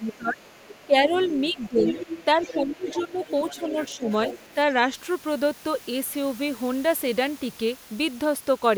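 From 0.0 to 0.42 s, the speech is suppressed in double talk. The level dips by around 20 dB. The likely cause is an echo canceller turning down the talker along with the far-end echo while both talk. It recurs at 0.85–1.86 s, 2.35–3.21 s, 3.63–4.1 s and 4.54–4.77 s. Those dips are shallower, about 10, 15, 10 and 5 dB. The sound drops and thins.

From 0.12 to 4.54 s, the other side's voice leaks through. It sits about 15 dB under the speech. It is likely loudspeaker echo the canceller left in the microphone signal.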